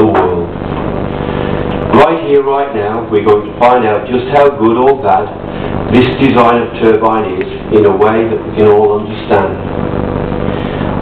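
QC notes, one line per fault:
0.12–11.01 s, clock slip clicks: a soft, even rattle of faint ticks, roughly twenty per second and a couple of hundred in all, strongest on loud or sustained high material and missing in quiet gaps. The likely cause is two devices running on unsynchronised clocks that differ by around 400 ppm, so the mismatch reaches a whole sample about every 50 ms and a single sample is dropped or repeated, leaving a tiny step in the waveform each time.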